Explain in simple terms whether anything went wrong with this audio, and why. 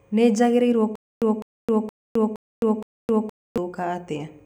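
Stutter with silent gaps, from 0.96 to 3.58 s: a fragment of speech about 0.2 s long plays five times, each followed by roughly a quarter second of dead silence, every 0.47 s. The playback likely stalled and replayed its last chunk, so the speech meant for that stretch is missing.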